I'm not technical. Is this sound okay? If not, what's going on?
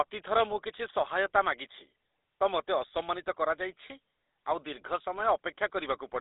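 No. Throughout, the speech has GSM full-rate codec damage, an old mobile-phone coding that adds a buzzy, gravelly roughness and removes everything above about 3.8 kHz, unlike a plain muffled phone line.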